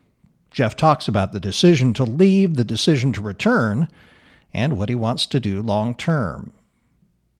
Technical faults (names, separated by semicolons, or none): none